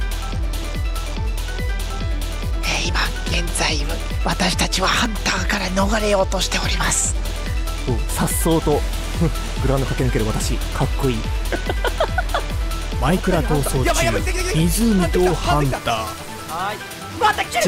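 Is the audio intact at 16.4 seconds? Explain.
Yes, the audio is intact at 16.4 seconds, with no dropout, click, distortion or other fault at that moment.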